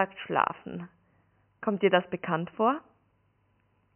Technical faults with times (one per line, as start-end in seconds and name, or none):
none